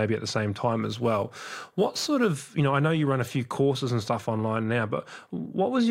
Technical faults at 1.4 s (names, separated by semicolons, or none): crude rate conversion